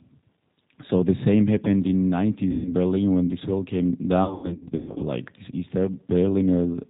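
The whole clip of speech passes through the G.729 codec at 8 kbit/s. Its damage is plainly audible. The voice is rebuilt from a vocal tract model and a few pulses per frame. Nothing above 4 kHz survives, so it sounds thin, rough and slightly synthetic.

From 2.51 to 2.73 s, after "the same happened in", comes VoIP packet loss concealed by the speech codec. About 140 ms of audio is missing. The decoder stretches the last sound into a buzzy tone or coloured noise that fades. The voice stays weak or distorted for a moment as "berlin when this wall" resumes.

From 4.24 to 5.03 s, after "when this wall came", the loss returns in scattered bursts. About half a second goes missing across 760 ms, with the longest gap 120 ms. Each gap is filled by the decoder's fading extrapolation, and the weakened voice recovers slowly between them.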